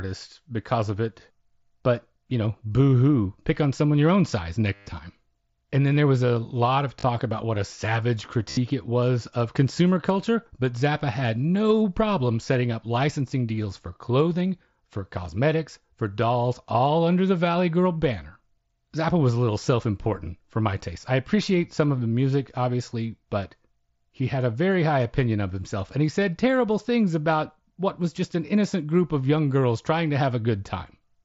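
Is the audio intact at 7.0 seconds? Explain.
No. From 6.99 to 7.04 s, between "was a lot of" and "about what a savage", there's concealed Bluetooth headset packet loss: the receiver papered over 45 ms of missing packets by looping recent waveform, so you hear a brief buzzy tone at full level, then a small warble as real audio returns.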